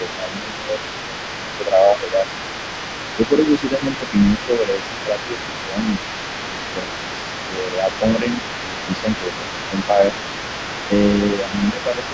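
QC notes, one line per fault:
0.00–2.63 s, 3.16–6.90 s, 7.45–10.02 s, 10.87–12.04 s: speech suppressed in double talk. The echo canceller likely mistook simultaneous talk for loudspeaker echo and pulled the gain down. The speech dips by roughly 10 dB in most stretches and less in the third, in patches totalling from under half a second to about two seconds.
Throughout: other side's voice leaking through. Residual loudspeaker echo likely survived the echo canceller and reached the microphone path. A second voice sits around 15 dB beneath the main speech for the whole clip, band-limited like the rest of the call audio, which stops near 8 kHz.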